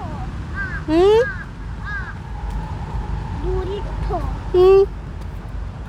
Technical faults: none

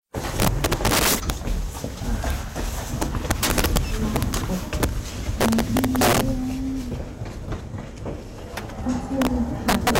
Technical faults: integer overflow

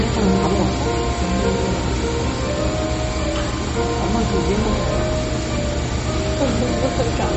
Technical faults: MP3 compression

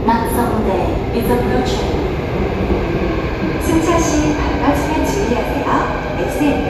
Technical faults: none

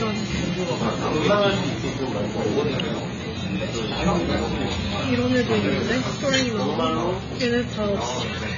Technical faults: AAC compression

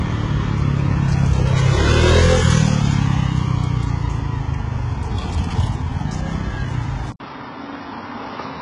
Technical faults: HE-AAC compression; input switched to a poorer device

